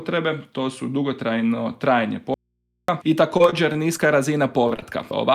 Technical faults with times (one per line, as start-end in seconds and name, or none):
2.34-2.88 audio dropout to a faint residue
3.37-4.08 repeated packet loss (robotic sound)
4.68-4.84 short concealed packet loss